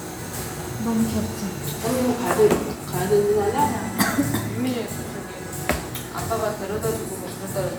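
No technical faults can be heard anywhere in this recording of everyday sounds. Nothing in the audio calls for comment on the recording or transmission side.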